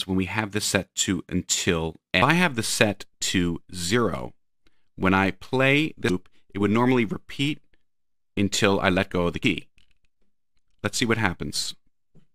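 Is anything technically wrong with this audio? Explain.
Yes. At 6.09 s there is damaged data in the compressed stream. Bytes in the encoded file were lost, corrupted or overwritten there. The decoder misreads those frames and loses sync until it finds the next valid frame header. The result is a brief glitch in the sound.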